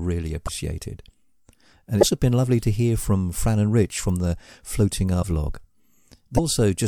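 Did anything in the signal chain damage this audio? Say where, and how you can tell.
Yes, at the codec stage: the speech breaks up briefly at 0.46–0.49 s, 2.00–2.03 s, 5.21–5.24 s and 6.36–6.39 s, each about one 26.1 ms MP3 frame long. Frames were likely cut out, so the next frame looked back into the bit reservoir and decoded another frame's bytes. Unlike a plain dropout, the sound then resumes further ahead rather than where it stopped.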